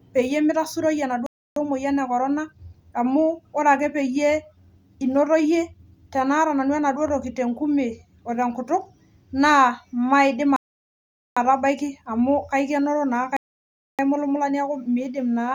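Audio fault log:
1.26–1.56 s, 10.56–11.37 s, 13.37–13.99 s: rebuffering stall. The player exhausted its downloaded audio and waited for more data, so the speech drops to silence for 0.30 s, 0.80 s and 0.62 s, then resumes exactly where it stopped, adding time but losing nothing.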